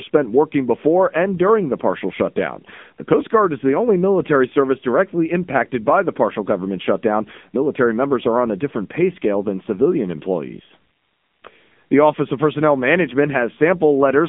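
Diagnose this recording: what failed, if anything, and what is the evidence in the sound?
Buzzy, synthetic speech throughout, nothing above 3.6 kHz: codec stage, AMR narrowband mobile codec, whose sparse pulse modelling fits a mode near 8 kbps.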